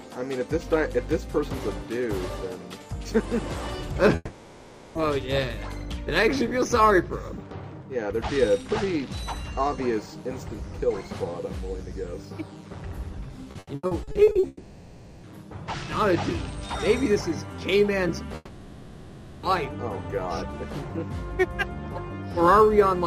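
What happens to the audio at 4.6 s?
At 4.6 s the sound smears into a buzzy, fading continuation of whatever came just before, from 4.15 to 4.98 s, with only a brief moment of silence, and then resumes with about 0.8 s skipped. This is likely a long network dropout, with the receiver filling the gap.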